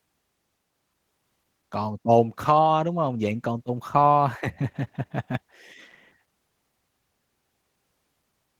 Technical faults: Opus voice compression

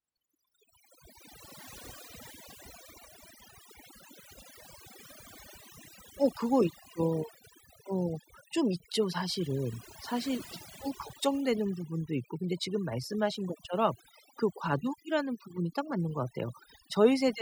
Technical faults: overdone noise removal

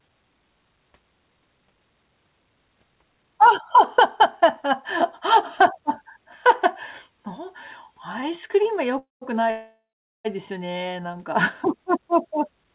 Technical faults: call audio freeze

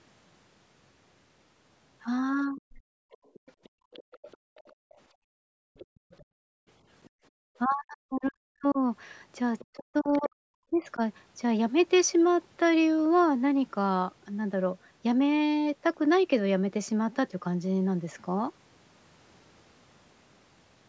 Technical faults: speech suppressed in double talk; other side's voice leaking through; background gated by the echo canceller

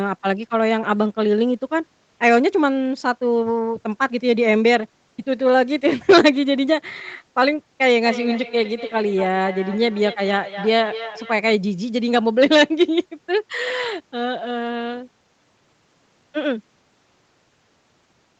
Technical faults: feedback echo between two devices

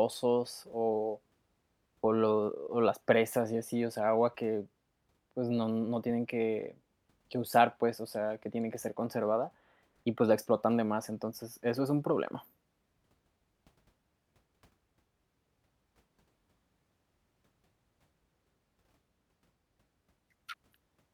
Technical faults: none

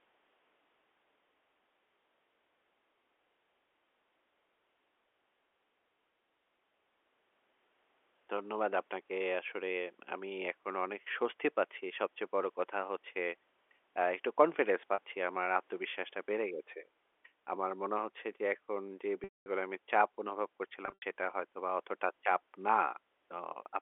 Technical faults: packet loss with pitch repetition

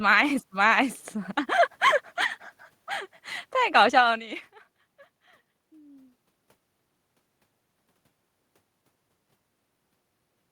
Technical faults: none

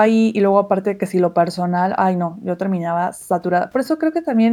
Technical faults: none

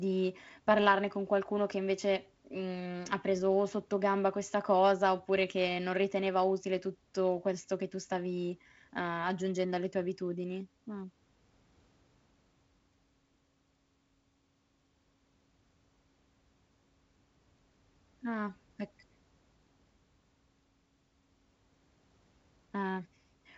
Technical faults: none

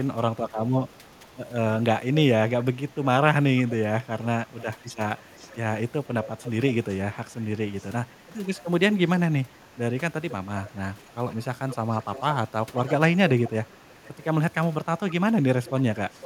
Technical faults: echo leak

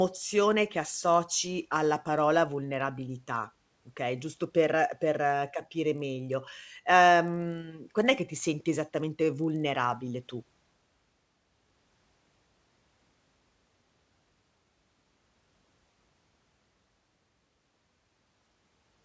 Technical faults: resampler restarted on every block

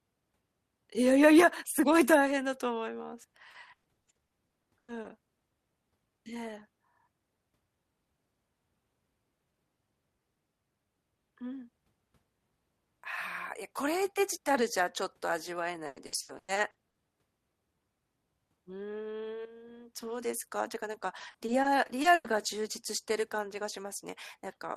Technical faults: repeated packet loss (robotic sound)

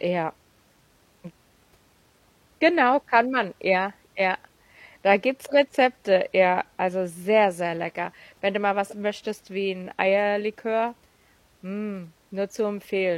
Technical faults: damaged data in a compressed stream

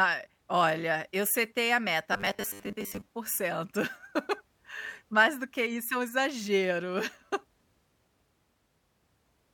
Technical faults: robotic sound from repeated short buffers

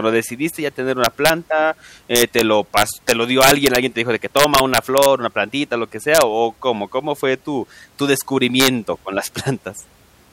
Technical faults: integer overflow

